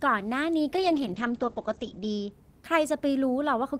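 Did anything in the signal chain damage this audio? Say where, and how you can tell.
Yes. Muffled, rough speech from 0.74 to 2.37 s: a call bitrate drop in the codec, 32 to 9 kbps, bandwidth cut to 8 kHz.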